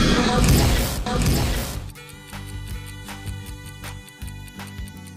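From 1.06 s to 3.92 s a second copy of the sound runs underneath the first, trailing it by roughly 0.7 s and sitting about 5 dB lower. It is a clean, full-range duplicate with no decay or room tone, and it cuts in and out abruptly at those boundaries. This is a doubled audio track, likely from the same signal being picked up a second time through a slower path and mixed back in.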